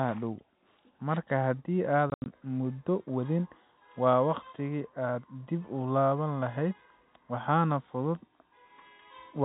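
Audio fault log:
2.10–2.26 s packet loss filled with silence: 120 ms of dropped audio in holes up to 80 ms long, consistent with 20 ms packets. On the waveform these are flat silent gaps. On the spectrogram they are blank columns with hard vertical edges.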